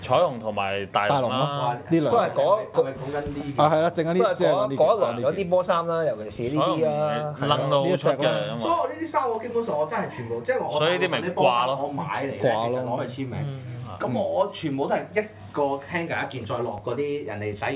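Nothing in this recording trips any alarm: no dropouts, glitches or other technical faults turn up anywhere along the way.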